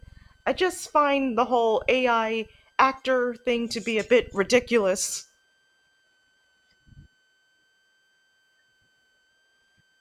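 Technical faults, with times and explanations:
Throughout: switching supply whistle. A switching power supply in the chain is running in an audible burst mode or beating with another supply, and its switching leaks into the audio as a thin, high whistle near 1.5 kHz that sits under the speech for the whole clip. Its pitch lies between about 1.53 and 1.59 kHz. The tone is faint, roughly 45 dB below the speech.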